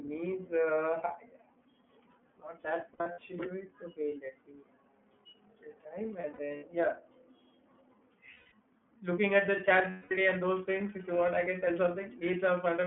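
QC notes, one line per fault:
Throughout: iLBC codec. The sound is confined to a narrow telephone band, roughly 150 Hz to 3.4 kHz, with nothing above it. The speech is clear but plainly rough and synthetic. The coder rebuilds each frame's excitation on its own, and the frame rhythm fits 30 ms frames at the 13.33 kbps mode. That model captures the voice's shape but not its fine texture, so the timbre sounds slightly artificial.
2.93 to 3.19 s, 6.21 to 6.64 s, 8.34 to 8.52 s, 9.90 to 10.12 s: lost iLBC frames. The first gap follows "not that" and the last follows "at the chat". In each, the speech turns into a held, slightly buzzy or breathy vowel. About 150 ms goes missing in each of the first two, scattered over 240 ms and 420 ms, with stretches up to around 70 ms. The third loses 180 ms and the fourth 210 ms. The decoder repeats the last pitch cycle mixed with noise and fades it. Frames stand alone, so the voice recovers almost at once.
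10.30 s to the end: periodic clock jitter. A rough, metallic edge sits on the speech and vanishes in pauses. The converter's clock is being shaken at around 2 kHz. Every component of the sound gains sidebands spaced about that far above and below it. Higher components are hit hardest, so the brighter parts of the voice carry the most grit. Because the sidebands ride on the signal itself, silence stays clean.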